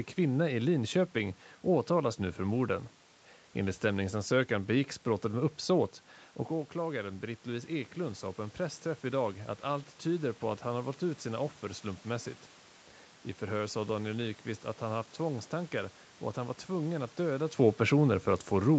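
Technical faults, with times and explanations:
6.78–9.95 s, automatic gain rising: after the talker moves back around 6.5 s and the input drops by about 9 dB, the gain control slowly lifts everything by about 3 dB. Speech and room noise swell together, and the waveform envelope and spectrogram brightness climb gradually.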